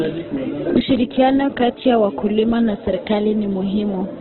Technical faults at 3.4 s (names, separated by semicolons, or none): Opus compression